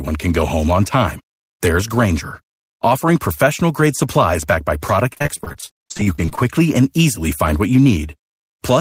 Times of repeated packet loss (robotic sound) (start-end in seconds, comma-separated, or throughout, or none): 5.13-6.43